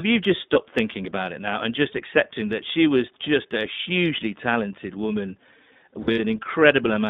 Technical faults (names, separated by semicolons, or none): iLBC codec; lost iLBC frames